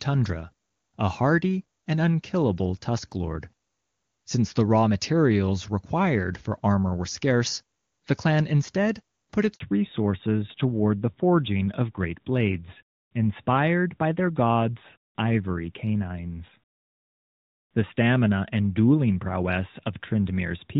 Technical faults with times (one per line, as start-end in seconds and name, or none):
9.54-9.60 handover gap
9.60-20.80 fallback to narrowband